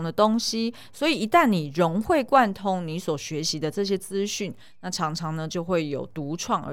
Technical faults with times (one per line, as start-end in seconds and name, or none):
none